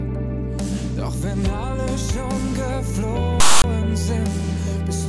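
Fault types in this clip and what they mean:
File tags played as audio, 3.40 to 3.64 s: tag text read as samples gives a loud, one-sided rasp, then zero padding drops to silence, both with hard edges.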